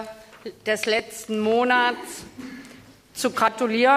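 At 0.99 s and again at 2.43 s the sound jumps, each time losing only a few milliseconds; at 3.48 s there is a larger jump of around 20 ms. There is no gap of silence at any of the three points. This is likely a dropped buffer (overrun): the samples were overwritten before being read, so the audio on either side of the missing piece is spliced directly together.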